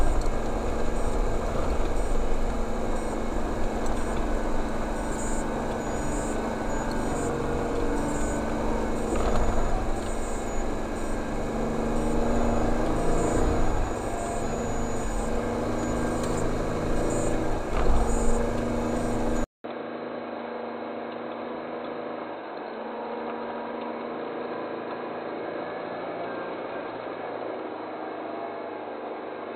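An input switched to a poorer device at 19.44 s is the likely cause of the change heard there. After a 200 ms gap, the sound runs to the end dull and narrow, with nothing above 4.1 kHz. It is roughly 10 dB quieter, over a new noise floor about 30 dB below it.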